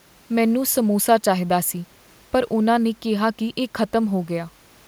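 No technical faults can be heard anywhere in the speech recording; the signal stays continuous and steady in level throughout.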